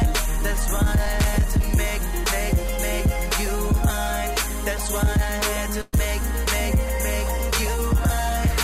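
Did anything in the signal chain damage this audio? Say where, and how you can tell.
Yes. There is a short concealed packet loss at about 1.05 s, and it comes from the network stage. Roughly 10 ms of audio never reached the decoder in time. The receiver bridged the hole with a few milliseconds of synthesised continuation based on the preceding sound, then blended back into the real signal. What you hear is a tiny smear or wobble in an otherwise continuous stretch.

There is also a burst of packet loss from 5.81 to 5.94 s, again a network fault. About 120 ms went missing in one run, which fits several consecutive packets dropped or arriving too late. The concealment extended the last sound across roughly 112 ms of that span and faded it as the gap wore on, so you hear it drawn out and dying away rather than dropping to silence. The audio then picks up further along, and the material in between is gone.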